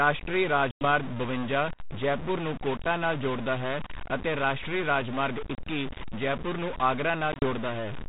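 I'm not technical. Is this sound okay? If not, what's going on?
No. Two problems can be heard.

Throughout the clip the speech has a distorted roughness, and the gaps between phrases are filled with a gritty noise instead of being quiet. This is a stuck bit, likely caused by one bit in the digital signal being jammed on or off by a faulty connection or converter. About half the sample values come out wrong by a fixed amount, and that produces both the distortion and the noise in the pauses.

There are also three dropouts, which are packet loss on an ADPCM call. The phone link uses G.726 ADPCM, the kind of coding cordless phones use. Lost chunks are replaced by silence, and the decoder briefly loses track of the sound's level. At 0.71 to 0.86 s, about 100 ms goes missing just before "ਬਵੰਜਾ ਜੈਪੁਰ ਨੂੰ ਕੋਟਾ". At 5.55 to 5.63 s, about 30 ms drops out between "ਹੈ ਅਤੇ ਰਾਸ਼ਟਰੀ ਰਾਜਮਾਰਗ" and "ਜੈਪੁਰ ਨੂੰ". 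At 7.32 to 7.44 s, after "ਜੈਪੁਰ ਨੂੰ", several short gaps totalling about 60 ms are spread over 100 ms. Each hole cuts off abruptly, and the speech comes back slightly distorted before it settles within a few tens of milliseconds.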